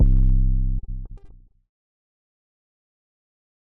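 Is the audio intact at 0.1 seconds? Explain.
Yes, at 0.1 seconds the audio is intact, with no dropout, click, distortion or other fault at that moment.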